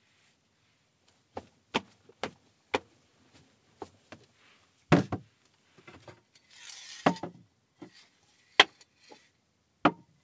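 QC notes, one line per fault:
Nothing stood out on listening to these sounds as carried over the call path.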